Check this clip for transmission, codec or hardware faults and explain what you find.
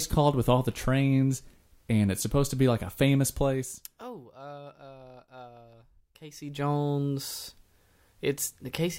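One fault is present: zipper noise from 6.15 to 6.7 s. The speech level shifts by roughly 20 dB in unsmoothed steps, around a hundred per second. Each step leaves a small click, so a rapid ticking zip rides on the speech during the change.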